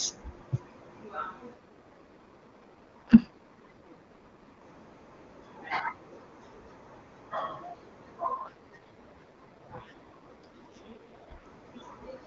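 From 1.53 to 4.62 s and again from 8.34 to 11.46 s, the speech turns rough and synthetic, then recovers. These are AMR rate drops. The AMR-WB (HD Voice) codec, clean at its top rate, is switched down to a much lower mode. The rougher texture fits a fall from 23.85 to 6.6 kbit/s, which leaves too few bits for the vocal model. The bandwidth holds and there is no gap.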